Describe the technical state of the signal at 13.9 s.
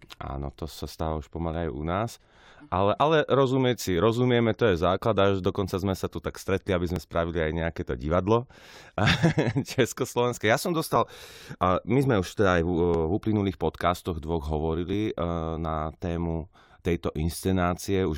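At 13.9 s the speech signal is intact, with no audible technical fault.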